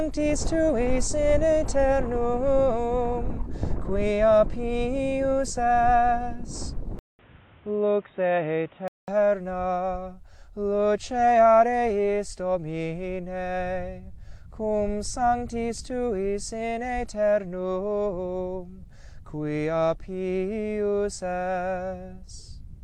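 Input switched to a poorer device, from 6.99 to 9.08 s: after a 200 ms gap, the sound turns dull and boxy, with nothing above 3.8 kHz and a new background noise well below the signal at much the same level, likely from a changed microphone.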